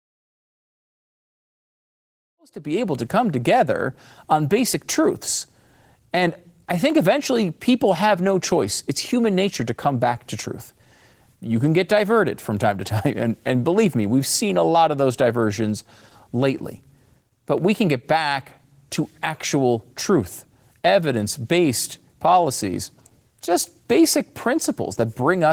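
A speech clip with Opus voice compression throughout. The voice sounds hoarse and faintly robotic, and the damage is plainly audible. The codec seems to be in hybrid mode, with linear prediction below 8 kHz and a transform layer above. A bitrate near 16 kbps would explain the coarse excitation. The opening smooth fade-in, starting around two and a half seconds and reaching full level at 3.1 s, sounds clean.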